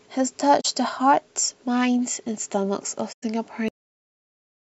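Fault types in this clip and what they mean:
AAC frame loss with muting: Compressed audio frames went missing, and the decoder filled their spectrum with zeros instead of guessing at the content. AAC frames overlap, so the speech fades out and back in rather than breaking off sharply. There are two soft-edged holes here. The first, at 0.60 s, lasts about 43 ms, which fits two lost frames. The second, at 3.12 s, lasts about 107 ms, which fits five lost frames.
Cut-off end: The final stretch of audio was never written out or played. At 3.68 s the speech stops in the middle of a sound and drops straight to digital silence. There is no natural decay and no trailing room sound. The level simply falls to nothing. That silence holds for the rest of the clip, about one second, so whatever followed that point is gone.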